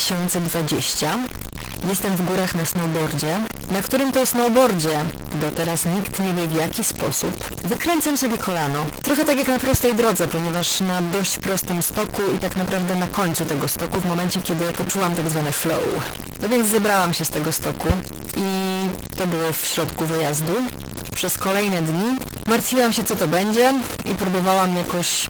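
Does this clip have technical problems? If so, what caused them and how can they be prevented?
Yes. The speech has a distortion throughout, with noise filling the pauses. That's likely a stuck bit, one data bit pinned by a faulty line or converter. Check the cabling and converter.

Opus voice compression runs throughout too, clearly audible as a hoarse, slightly robotic hybrid-mode sound that fits about 16 kbps. Give the encoder a higher bitrate.

There are two loud pops, about 20 dB above the speech: at 9.74 s after "tak jak na" and at 13.95 s before "w momencie kiedy poczułam". They're likely voltage spikes from a plug, switch or static. Secure the connections and ground the setup.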